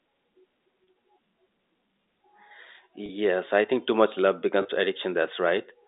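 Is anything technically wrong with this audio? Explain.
Yes. Packet loss with pitch repetition occurs at 0.84 s, 3.06 to 3.09 s, and 4.62 to 4.65 s. Each gap, consistent with a single lost 30 ms packet, is filled by repeating the last pitch period, which sounds like a brief, slightly held buzz within the telephone-band sound.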